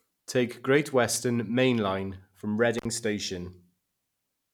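At 2.78 s the speech drops out in an intermittent contact fault. A loose cable or plug briefly opens the signal path. The line stays open for about 60 ms, until 2.85 s. Crackle marks both edges, with faint hiss in the gap.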